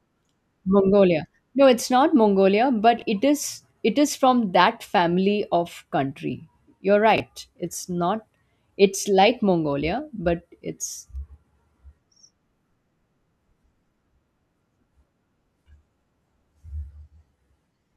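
At 2.98 to 3.02 s, just before "it is it is", two 20 ms chunks of the speech play in the wrong order. The later chunk comes first and the earlier one arrives one chunk late. Nothing is missing, but the sequence breaks. The same fault, chunks out of order, recurs at 7.16 to 7.2 s. Each swap leaves hard joins, and the 40 ms span sounds briefly jumbled.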